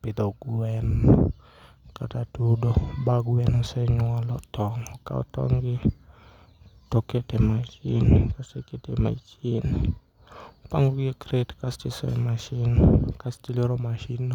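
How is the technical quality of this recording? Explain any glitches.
No glitches or faults are audible anywhere in this speech recording.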